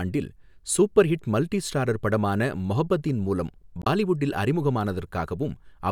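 Right after "மொஹப்பதீன் மூலம்", from 3.81 to 3.87 s, damaged data in the compressed stream gives a short glitch. The decoder misreads corrupted frames and hunts for the next frame header.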